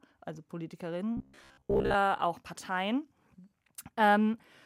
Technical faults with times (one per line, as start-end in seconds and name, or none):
1.17-1.95 robotic sound from repeated short buffers